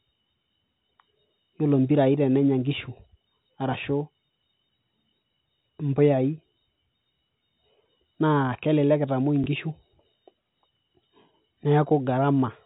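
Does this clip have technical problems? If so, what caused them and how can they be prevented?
Yes. Just after "kelelek itamuoi", from 9.44 to 9.46 s, there is a brief packet loss with the last packet repeated. The 20 ms stretch, which fits a single lost packet, is replaced by a replay of the preceding audio. The repeat gives a small blip, not the silent hole a zeroed gap would leave. A jitter buffer with proper packet loss concealment, or forward error correction, would prevent it.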